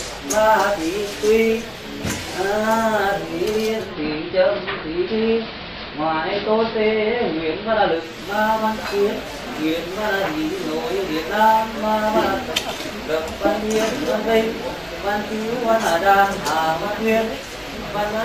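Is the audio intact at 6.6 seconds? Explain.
No. From 3.63 to 8.26 s the sound turns duller, with hiss roughly 40 dB under it and no change in level. This is digital radio blending to analogue: the receiver lost the digital stream and cross-faded over about 366 ms to the station's narrower AM broadcast, then back.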